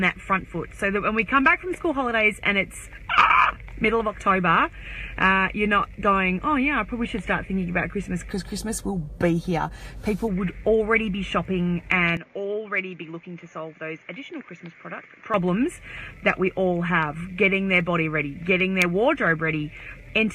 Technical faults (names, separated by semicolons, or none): input switched to a poorer device